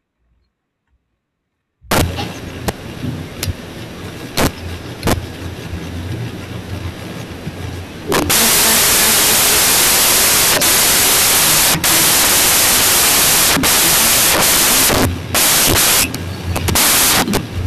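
From 1.91 s to the end, a wrong sample width fault: 16-bit data is being read as packed 24-bit, so samples straddle mismatched bytes. The speech turns into loud, harsh noise with the original faintly buried underneath, running 1.5 times too fast and pitched up.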